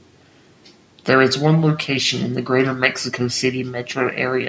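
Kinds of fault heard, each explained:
Nothing here counts as a fault; the speech has just gone through a call's microphone processing, which trims off the deepest bass and leaves nothing above 8 kHz, and that's simply how such a path sounds.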